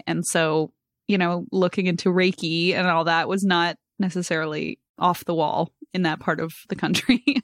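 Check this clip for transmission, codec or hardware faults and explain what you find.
Nothing here points to a transmission, codec or hardware fault; the speech comes through steady and intact the whole way, with no dropouts, glitches or damage to catch the ear.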